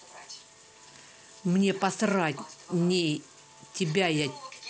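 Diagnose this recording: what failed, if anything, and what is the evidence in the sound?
Nothing failed in this recording.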